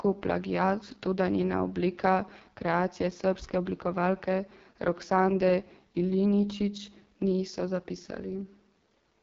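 Speech passed through the AMR wideband (HD Voice) codec, with heavy damage throughout. The voice sounds rough and raspy, with a buzzy, grainy edge. That roughness fits the codec's lowest rate, around 6.6 kbit/s. At this rate the pulse-driven vocal tract model has too few bits to describe each frame accurately. Nothing is present above about 7.4 kHz. The top band is synthetic shaped noise rather than real detail.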